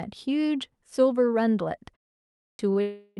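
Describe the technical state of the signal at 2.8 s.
Right around 2.8 s, a short stall from a late packet runs from 2.73 to 2.77 s. The last sound is held for about 20 ms and then continues with nothing lost. It is brief enough to read as a slight smear rather than a break.

From 2.81 to 3.19 s a call audio freeze follows, likely from packets held up in transit. The sound stretches into a fading buzz for 0.35 s without ever reaching silence, then resumes where it stopped. Its length is what sets it apart from the stall.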